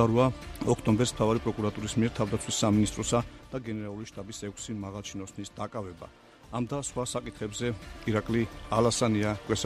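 From 6.64 to 8.03 s, a level change of roughly 10 dB is applied in coarse unsmoothed steps, around twenty per second, causing zipper noise: each jump in gain leaves a tiny click, so a fast ticking, zipping texture rides on the sound while the level moves.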